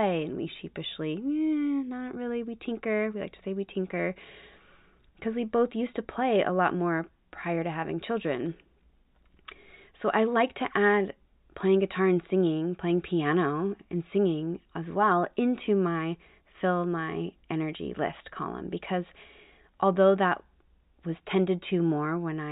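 Speech recording with no audible technical faults anywhere along its length.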